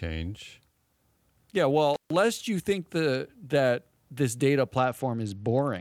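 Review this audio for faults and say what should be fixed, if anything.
Intermittent contact at 1.94–2.10 s: the sound cuts out for about 144 ms with crackle at both edges and faint hiss, unlike a clean digital dropout. Reseat or replace the loose cable or plug.

Bluetooth SBC bit pool drop from 4.77 s to the end: treble dulls while gritty quantisation noise rises, which fits a bit pool falling from 28 to 10, near 84 kbps. A simple low-pass would not add grit. Reduce wireless congestion or use a wired link.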